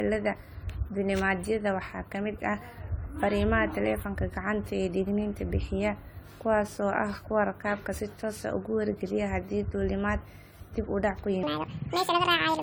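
Throughout this speech clip the sound is swirly, hollow and smeared, with consonant attacks blurred and a watery texture that sits over everything. That smearing, beyond what the bitrate alone would explain, is the signature of generation loss: the audio has likely been encoded and decoded around seven times, consistent with repeated AAC-LC passes at 64 kbit/s. Each pass quantises on a shifted frame grid, so noise and spectral holes pile up. Right after "dib u dhac ku", from 11.43 s to the end at 12.62 s, the speech suddenly turns high and hurried. This is a section at the wrong speed, playing 1.68 times too fast, which raises the pitch by nearly ten semitones because speed and pitch shift together. The likely cause is that this stretch was fitted to the wrong clock by an editor or player.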